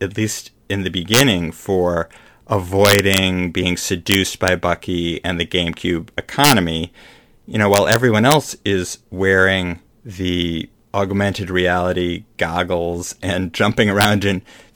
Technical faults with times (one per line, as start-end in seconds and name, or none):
1.14-1.20 integer overflow
2.85-3.18 integer overflow
4.12-4.48 integer overflow
6.44-6.52 integer overflow
7.74-7.96 integer overflow
8.31-8.34 integer overflow
14.01-14.05 integer overflow